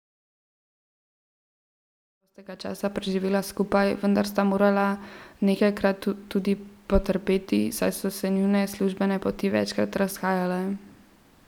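There are no technical faults to describe in this speech, where the level just fades smoothly in from around 2 s to 3.14 s.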